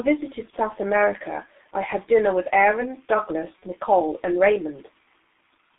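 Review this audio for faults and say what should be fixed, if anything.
G.723.1 codec, throughout: heavy low-bitrate coding leaves the speech muffled and hoarse, with smeared consonants. The band runs only from about 250 Hz to 3.6 kHz, and the coarse, slowly updated voice model fits a rate near 6.3 kbit/s. To prevent this, use a wideband codec at a higher bitrate.

VoIP packet loss concealed by the speech codec, at 0.50 to 0.56 s and 3.59 to 3.64 s: each dropout is about 30 ms, consistent with one lost frame. The decoder fills it by extrapolating the last pitch and filter at falling gain, giving a brief buzzy or noisy, fading smear that carries into the next tens of milliseconds or more. To prevent this, add a jitter buffer and forward error correction, or improve the network path.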